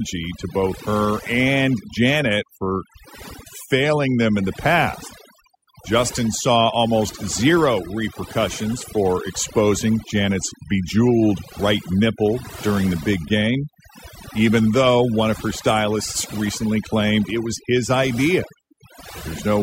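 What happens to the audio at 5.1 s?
At 5.1 s the speech carries overdone noise removal, present across the whole clip: bands near the estimated noise floor are pushed down hard, leaving near-silent gaps with twinkling specks. Unlike a noise gate, it suppresses individual frequency bands rather than muting everything at once.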